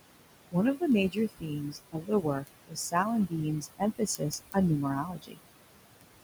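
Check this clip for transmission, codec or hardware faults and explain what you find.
Three faults are present in this speech clip. There is a processing fault from the noise suppressor, a clock fault on a digital link, and repeated losses of speech from the same suppressor.

Noise suppressor artifacts run through the whole clip. The suppressor lowers bands it judges to be steady noise, frame by frame, by about 20 dB. The room noise, about 12 dB below the speech, sinks between phrases and rises under them.

Word clock ticks run from 0.11 s to 6.2 s. A receiving device runs on its own clock and is not locked to the sender's. The mismatch is a few hundred ppm. Roughly every 70 ms, a sample is dropped or repeated. The result is about a hundred sharp, regular ticks.

Speech cut by the noise suppressor occurs at 1.11–1.51, 1.7–2.48, 2.67–2.94, 3.6–3.82, 3.98–4.56 and 5.03–5.41 s. The suppressor mistook quiet speech for noise and turned it down by about 17 to 21 dB. 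The affected speech sounds swallowed or faint.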